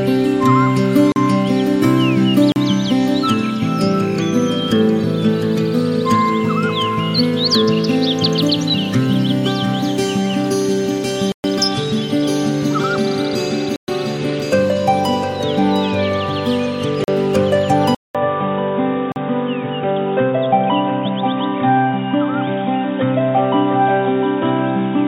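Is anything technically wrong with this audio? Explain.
Yes, there are two problems. A block of digital silence occurs six times: 40 ms gaps at 1.12, 2.52, 17.04 and 19.12 s, and 120 ms gaps at 11.32 and 13.76 s. Samples drop to zero with no fade, so each gap sounds like a tick or a brief hole, and it shows as a flat line on the waveform.

At 17.95 s, after a 200 ms silence, the sound turns duller until the end, likely because the input switched to a poorer device. On the spectrogram, everything above 3.8 kHz is gone, the loudness stays about the same, and a faint new noise floor appears.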